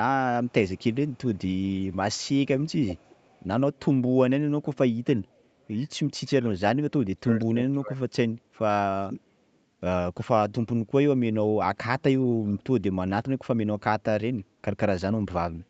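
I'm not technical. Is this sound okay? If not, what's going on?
No. Two problems can be heard in this speech.

The first is an echo leak. In short bursts at 0.45, 0.68 to 1.18, 1.34 to 1.62, 1.79 to 1.91, 2.14 to 2.28, 2.66 and 2.88 to 3.42 seconds, a faint ghost copy of the voice trails about a third of a second behind. The last burst is noticeably louder. The likely cause is a loudspeaker on one end whose sound got back into the microphone and was sent back.

The second is speech suppressed in double talk. Between 7.17 and 8.18 seconds, for roughly 0.7 seconds in total, the talker's own voice drops sharply or cuts out in pieces, as if someone briefly turned it down. Unlike the echo, nothing extra is added. The real voice is the part that goes missing.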